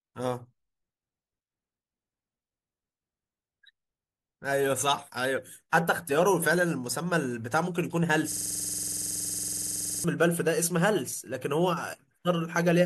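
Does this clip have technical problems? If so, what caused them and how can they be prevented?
Yes. From 8.32 to 10.04 s a system hang loop occurs. The machine or driver stalled while the audio hardware kept replaying one 46 ms stretch of its ring buffer, which fits a 2048-sample buffer. The speech becomes a rough 21.5 Hz buzz, repeated dozens of times. On a waveform it appears as an identical segment tiled end to end, and a spectrogram shows the same thin slice copied over and over, with energy lined up at 21.5 Hz spacing. To prevent it, give the audio thread real-time priority and have the driver mute output when the buffer stops being refilled.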